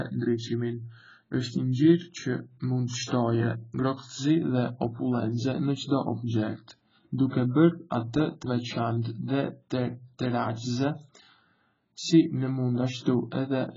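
The speech was likely squeezed through AAC compression at a very low bitrate, around 12 kbps, throughout the clip. Nothing is left above 7.5 kHz, so it sounds dull and muffled, and the heavy coding damage leaves sibilants fizzy and sustained sounds warbling and smeared.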